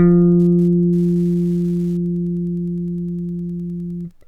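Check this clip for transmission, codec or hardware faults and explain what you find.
One hardware fault: Wi-Fi interference throughout, a faint ticking about ten times a second from a nearby radio's 102.4 ms beacons rectified by the circuit, unlike GSM's denser buzzing.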